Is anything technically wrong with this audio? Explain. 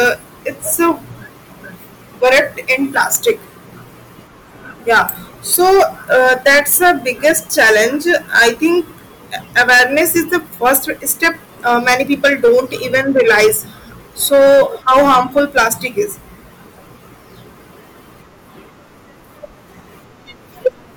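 Yes. Hard clipping runs through the whole speech clip. The signal is driven about 12 dB past what the chain can pass, so peaks are sliced flat. Around 4 percent of samples hit the ceiling. The flattened tops add high harmonics, heard as harsh fuzz on loud syllables.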